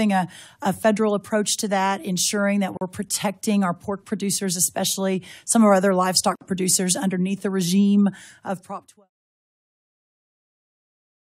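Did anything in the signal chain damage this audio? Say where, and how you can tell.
Yes. The damage happened at the codec stage: the audio was encoded in separate pieces and then joined without trimming, so each join left a gap at a join of encoded pieces. Each encoder run's start-up delay and padded final frame stayed in. The result is two short silences in continuous sound, from 2.77 to 2.81 s (about 41 ms) and from 6.35 to 6.41 s (about 56 ms). Each has smeared edges, and the sound resumes exactly where it broke off. The fade-out ending at 9.1 s is a separate, smooth edit.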